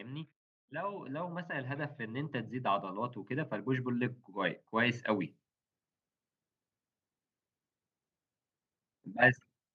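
From 0.68 s to 5.37 s the level climbs steadily by about 16 dB. This is automatic gain rising. The gain control judged the input too quiet and kept turning it up. Speech and background noise swell together, so the room grows along with the voice.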